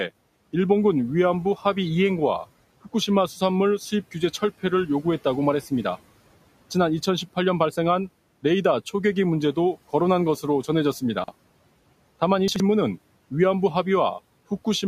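At 11.24 s to 11.32 s, and again at 12.48 s to 12.6 s, the speech briefly jumbles: chunks out of order. A short block of audio, sounding about 40 ms long, arrived late and played after the block that should have followed it. The second event sounds displaced by roughly two blocks. Nothing is missing, but each swap leaves hard joins, over room noise sitting about 22 dB below the speech.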